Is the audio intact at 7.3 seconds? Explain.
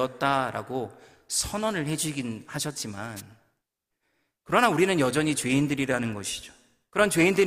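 Yes, at 7.3 seconds the audio is intact, with no audible fault at that moment.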